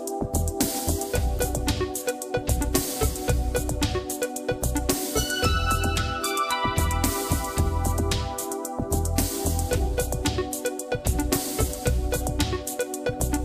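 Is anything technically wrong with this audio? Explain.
Yes, there's one glitch. At about 1.39 s there's a corrupt frame decoded: bits in a few compressed frames got flipped, and the decoder played them anyway, putting energy at the wrong frequencies. You hear it as a brief chirp, squeak, blip or burst of noise, peaking around -20 dBFS.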